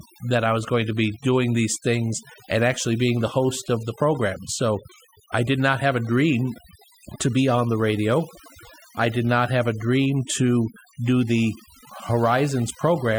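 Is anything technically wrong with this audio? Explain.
Yes. This speech clip suffers from overdone noise removal, present from start to finish. A noise reduction stage was set too aggressively, so any frequency band whose level sits close to the estimated noise floor gets pulled far down or switched off entirely. Low-level parts of the voice fall below that threshold and are removed along with the noise. The gaps between phrases drop to near silence scattered with twinkling, chirpy specks.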